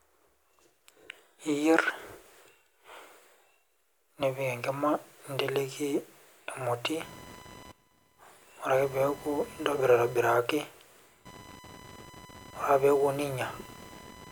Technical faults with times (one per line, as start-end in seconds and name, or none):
7.03-14.31 computer activity noise